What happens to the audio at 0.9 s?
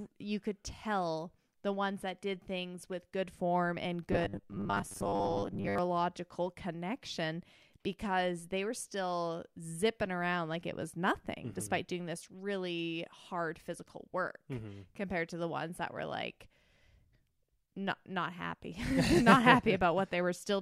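Nothing goes wrong at 0.9 s; the audio plays through that moment intact, with no dropout, click or distortion.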